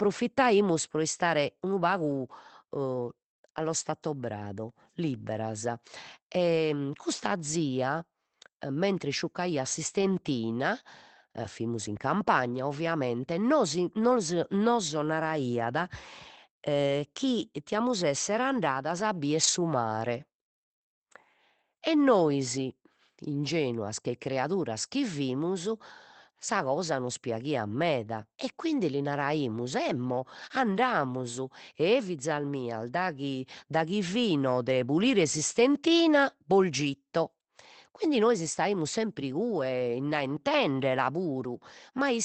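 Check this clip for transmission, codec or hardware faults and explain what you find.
One fault recurs: a lost packet rebuilt from error correction, six times, at 2.11–2.13 s, 3.57–3.59 s, 10.01–10.03 s (after "mentres isciuccaiat"), 11.43–11.45 s, 19.43–19.49 s (after "esser andadas a bider") and 36.73–36.75 s (after "de pulire s'istentina bos"). Packets were dropped, and the decoder substituted the low-bitrate backup copy carried in the following packet, so there is no gap. Each patch lasts 20 ms, or 40 ms at 19.43 s where two packets were lost, and sounds briefly rougher and noisier than the audio around it. The call path itself sounds like Opus limited to 8 kHz, which fits a stream of about 24 kbps.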